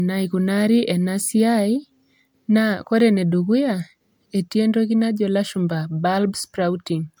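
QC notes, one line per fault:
throughout: generation loss. The speech sounds swirly, smeared and hollow, with blurred attacks, likely from about seven rounds of MP3 decoding and re-encoding, consistent with a 128 kbit/s chain. A spectrogram shows flickering holes, speckled noise and nothing above 20.2 kHz.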